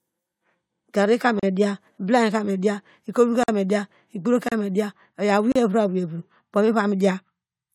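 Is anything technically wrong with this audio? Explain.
Yes. At 1.40, 3.43, 4.49 and 5.52 s the speech breaks for 32 to 48 ms. These are gaps between stream segments: timestamps leave holes, which the player fills with hard-edged silence. The spacing in multiples of about one second fits 1-second segments, and no audio is lost.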